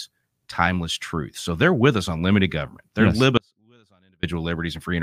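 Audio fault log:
3.37–4.23 s, audio dropout to a faint residue. The speech cuts out abruptly for about 0.86 s and returns just as suddenly. The gap is not silent. A faint trace of the signal remains, around 40 dB below its normal level. There is no fade in or out, so it cannot pass for a natural pause. The likely cause is a brief loss of the main feed while the path after the break stayed live and kept passing a small leak.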